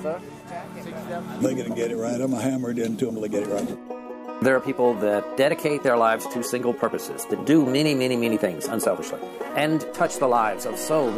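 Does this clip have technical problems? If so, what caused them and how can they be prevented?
Yes. From 2.97 s to the end at 11.17 s, the sound abruptly turns rushed while its pitch stays unchanged. This is a time-stretched section running at 1.45 times the original speed, likely from software squeezing the audio to fit a set length by dropping short slices so the pitch holds. Prevent it by trimming or re-recording material to the required length rather than forcing a stretch.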